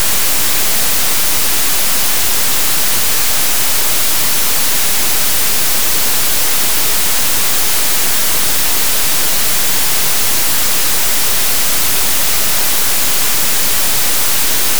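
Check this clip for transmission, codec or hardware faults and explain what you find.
Two brief reordering faults are audible. Chunks out of order at 9.14 to 9.22 s and 11.16 to 11.2 s: a 20 ms block arrived late and played after its successors, three chunks late in the first and one in the second. Nothing goes missing, but each spot sounds jumbled across its hard joins.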